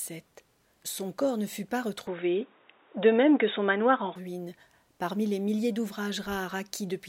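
From 2.07 to 4.16 s the sound turns dull and boxy, with nothing above 3.8 kHz, a level shift of roughly 5 dB and a faint new background noise, with no gap at either switch. The likely cause is the input switched to a poorer, narrower-band device, then back.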